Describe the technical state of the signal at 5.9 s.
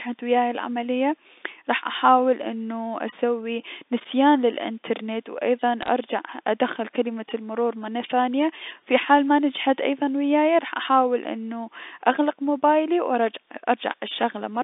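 Around 5.9 s there is a short burst of bit errors on a digital phone line, running from about 5.83 to 5.88 s. On the mu-law telephone path, a few of the transmitted bits arrive flipped. Roughly two in every thousand are wrong, spread over a handful of frames, and each flip corrupts a single sample. Flips landing on high-order bits, or on the sign bit of a loud sample, jump far from the waveform and produce sharp isolated ticks. Unlike packet loss, nothing drops out or gets concealed; the speech underneath continues unchanged between the ticks.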